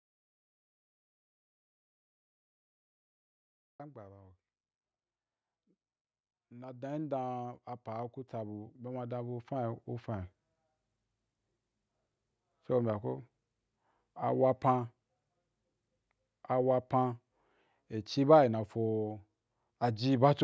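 The recording opens in silence, with no room tone, until speech cuts in at 3.80 s. This audio dropout to silence likely means the input was lost while silence kept being written. From 6.5 s to 10.36 s the speech and its background swell together by about 15 dB as automatic gain rising lifts a level it judged too quiet, all within the call microphone's band, which stops at 8 kHz.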